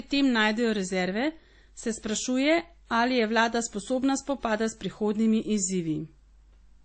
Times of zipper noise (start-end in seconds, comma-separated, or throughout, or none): none